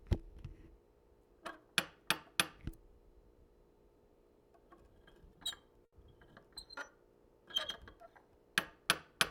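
A short stall from a late packet occurs at 5.85 to 5.94 s. A packet arrived late, the jitter buffer ran dry, and the receiver stretched the preceding sound for about 70 ms before resuming where it stopped. Nothing is lost, but that moment hangs slightly, and everything after it plays 70 ms later.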